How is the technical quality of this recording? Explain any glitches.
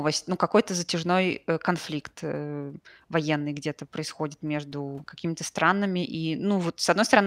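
The technical quality of this recording shows no glitches to explain.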